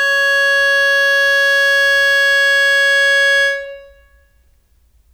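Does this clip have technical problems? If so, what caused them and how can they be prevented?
No, this music clip has no audible technical faults, so there is nothing to trace to a cause or prevent.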